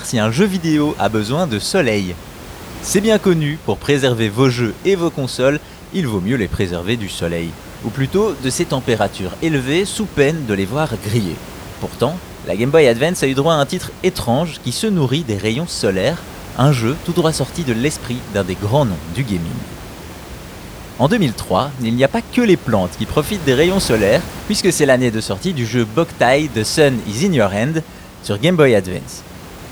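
No faults are audible in the speech, and the room noise sitting about 17 dB below it belongs to the recording, not the system.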